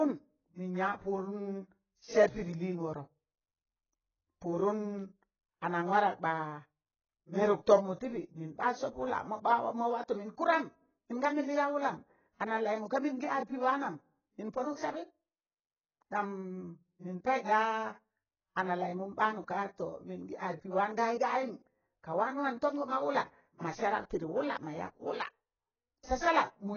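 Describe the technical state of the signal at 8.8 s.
At 8.8 s the speech sounds dull and warbly, with nothing above 6.8 kHz, likely heavy AAC compression at a very low bitrate, around 12 kbps, running throughout.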